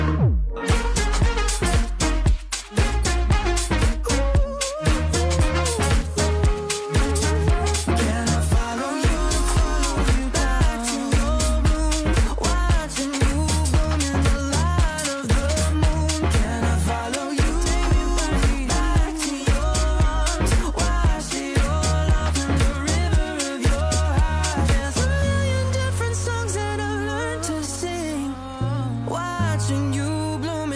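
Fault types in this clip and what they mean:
There are no fault types in this clip to list or explain.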